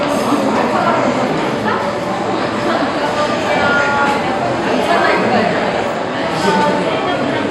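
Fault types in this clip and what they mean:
No technical faults can be heard anywhere in this recording of sounds.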